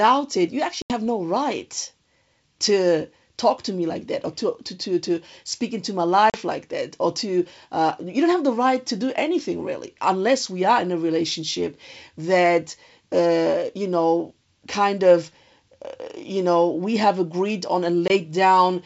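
This speech clip has abrupt silent holes at 0.82 s (after "it you", about 80 ms), 6.3 s (after "to speak into my", 40 ms) and 18.08 s (after "we have agreed on", 20 ms), each followed by briefly, slightly distorted speech. This is packet loss on an ADPCM call: missing packets, from a few down to one, became silence, and the decoder's predictor and step size lost sync with the sender's until they re-adapted. The underlying G.722 wideband coding sounds clear, consistent with the 64 kbit/s mode.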